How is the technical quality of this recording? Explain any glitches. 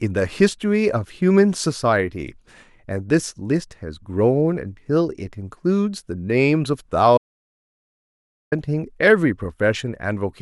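The speech has one glitch. An audio dropout to silence runs from 7.18 to 8.52 s: about 1.34 s of silence, likely from a momentarily lost input. The sound cuts out abruptly without room tone, showing as a flat waveform line and a blank spectrogram band.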